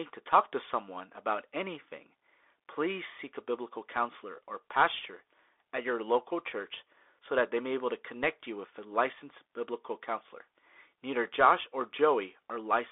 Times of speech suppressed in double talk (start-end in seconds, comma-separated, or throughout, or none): none